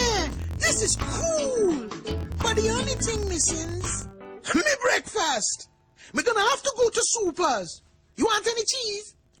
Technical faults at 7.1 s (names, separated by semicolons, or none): filter restarted on every block